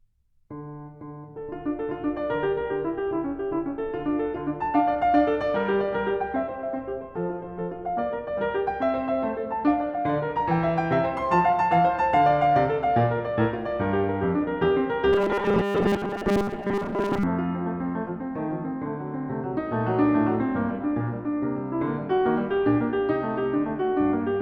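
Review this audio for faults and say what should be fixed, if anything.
Robotic sound from repeated short buffers, 15.13 to 17.23 s: the music collapses into a rigid, metallic buzz at 200 Hz while still loosely tracking the original. The likely cause is new audio arriving too seldom, so the playback software covers the gaps by looping the most recent fragment, which fits a 5 ms buffer. Most of that stretch is repeated material rather than real audio, and the loop rate stamps its own fixed pitch over the music. To prevent it, keep the audio buffer reliably fed, for example with a larger buffer or higher scheduling priority for the audio thread.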